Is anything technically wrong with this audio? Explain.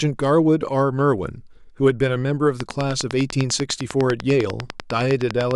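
Yes. From 2.60 to 5.52 s a train of clicks ticks steadily at about 10 per second, likely interference pulses, much alike in shape and loud above the speech, unlike random crackle.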